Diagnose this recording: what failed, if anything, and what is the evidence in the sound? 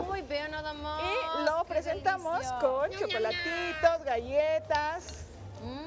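Nothing failed at any stage of the chain: the signal stays continuous throughout, and no audible event marks a breakdown in the wiring, conversion, buffering, processing, transmission or playback.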